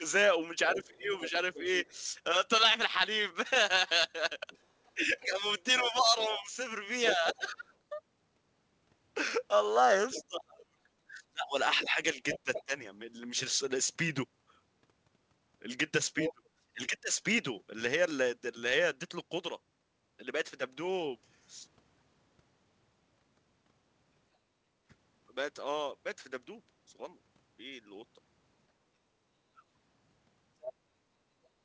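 From 0.0 to 1.33 s the speech dips by roughly 15 dB in short pieces. This is speech suppressed in double talk. The echo canceller likely could not tell the talker from loudspeaker echo and turned both down.

From 0.66 to 12.64 s a second voice sits underneath, about 15 dB below the speech. This is the other side's voice leaking through. The echo canceller likely left some loudspeaker sound in the microphone signal.

Between 4.94 and 12.73 s the speech drops repeatedly, by up to about 30 dB, for around 3 seconds in total. It likely comes from the same double-talk suppression.

From 16.14 to 17.21 s the speech again cuts out in pieces, by roughly 25 dB. This is likely double-talk suppression.

Within that stretch, from 16.25 to 16.49 s, the leaked far-end voice is loud, only about 5 dB below the speech. It is likely an echo-cancellation miss.

At 24.44 to 24.84 s the room sound dips by about 10 dB, then returns. 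This is background gated by the echo canceller, which clamped the microphone while the loudspeaker played.

A shorter gate follows at 29.06 to 29.19 s, dipping about 8 dB.

From 29.52 to 29.66 s a brief speech dropout of roughly 30 dB points to double-talk suppression as the likely cause.

From 30.62 to 30.73 s a short scrap of the other voice leaks through, about 10 dB below the speech. It is likely residual echo.

The audio has nothing above 8 kHz, which fits a wideband call codec such as G.722.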